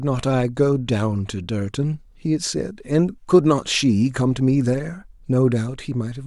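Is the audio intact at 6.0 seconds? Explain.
Yes, the speech at 6.0 seconds is intact, with no dropout, click, distortion or other fault audible at that moment.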